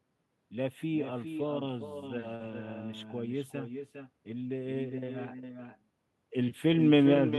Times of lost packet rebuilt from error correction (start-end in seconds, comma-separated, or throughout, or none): 2.40-2.50